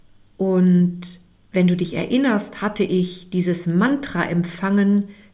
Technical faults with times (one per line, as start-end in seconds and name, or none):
none